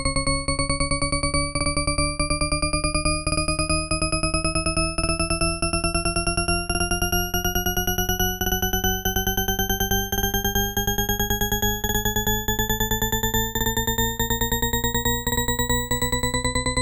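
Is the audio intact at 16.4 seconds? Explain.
Yes, the audio is intact at 16.4 seconds, with nothing at that moment disturbing the sound.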